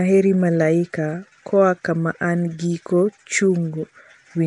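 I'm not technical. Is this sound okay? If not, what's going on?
No. The speech sounds rough and hissy all the way through, with a smeared, underwater quality. The very top of the sound is missing too. Nothing comes through above 10.6 kHz. The likely cause is Nellymoser compression, the old Flash microphone codec. It squeezes sound into small chunks with very little detail. Weak frequency bands get dropped and replaced with noise. That creates the hissy halo you hear around the voice.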